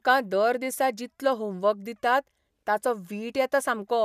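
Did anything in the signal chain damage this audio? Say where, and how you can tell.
No, nothing in the signal chain audibly damaged this speech recording; the signal arrives intact at every stage from capture to playback.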